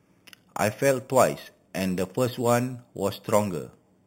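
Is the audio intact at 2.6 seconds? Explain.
No. At 2.6 seconds, as throughout the speech, imaging from sample-and-hold upsampling adds a metallic fizz. Each sample was repeated to go from 8 kHz to 44.1 kHz with no smoothing, so the waveform shows tiny stair-steps. The spectrogram shows mirrored harmonics from 4 kHz to 8 kHz, about 16 dB down, falling as pitch rises.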